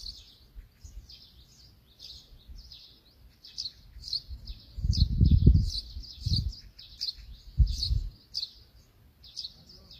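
Throughout, the audio was likely squeezed through HE-AAC at a very low bitrate, which fits roughly 24 kbps, with treble synthesised from copied lower bands rather than coded. The top end sounds gritty and metallic, its harmonics mismatched, and nothing remains above 14.9 kHz.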